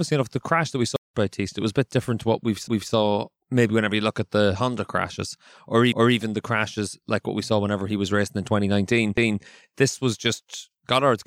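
Playback stall, 0.96 to 1.14 s: the speech cuts out for about 182 ms, then resumes, most likely because the player ran short of data or its thread was blocked.

Overlapping chunks, at 2.68 to 2.93 s, 5.93 to 6.18 s, and 9.18 to 9.43 s: the speech was handled in 3 s chunks that each began 250 ms early, so a quarter second replays at every join.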